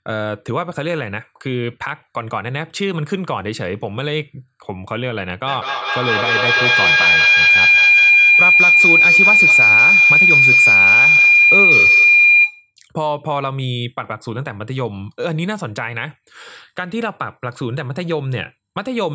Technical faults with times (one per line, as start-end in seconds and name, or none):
5.46-12.74 feedback howl